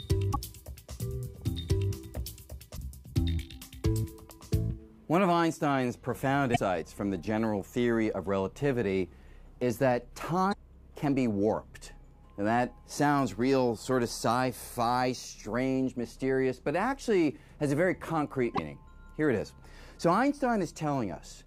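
Damaged data in a compressed stream at 0.33–0.36, 2.73–2.79, 6.52–6.58, 10.49–10.55 and 18.54–18.59 s: corrupted bytes make the decoder misread frames and lose sync while hunting for the next header, giving brief chirps or squawks of about 30 to 55 ms.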